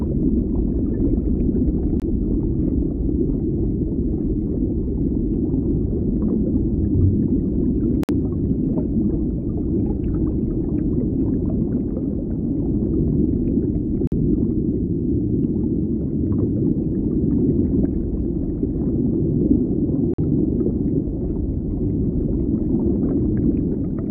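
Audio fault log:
2.00 s, 8.03–8.09 s, 14.07–14.12 s and 20.14–20.19 s, gap between stream segments: the sound drops to abrupt silence with hard edges, for about 20 ms at 2.00 s and about 47 to 54 ms at the later three, then resumes exactly where it left off. The holes fall at 6-second intervals, matching the segment length. Each segment's timestamps leave a short space before the next, and the player fills it with silence, so nothing is lost.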